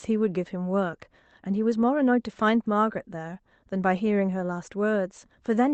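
There are no technical faults to describe in this speech at any point in time.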